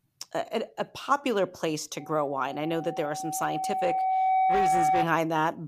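At 1.99 s, right after "a popular place to", loudspeaker feedback squeal sets in: the microphone is re-amplifying its own loudspeaker output, and at 756 Hz the loop gain exceeds unity. The tone swells over roughly two seconds to about 5 dB above the speech, persisting until 5.10 s.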